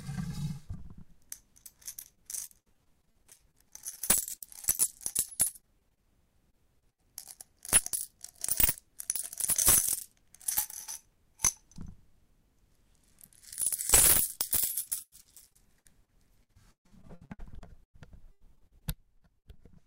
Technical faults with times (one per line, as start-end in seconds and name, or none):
2.07-6.05 repeated packet loss (robotic sound)
6.51-7.00 repeated packet loss (robotic sound)
14.84-17.96 repeated packet loss (robotic sound)
18.32-19.61 repeated packet loss (robotic sound)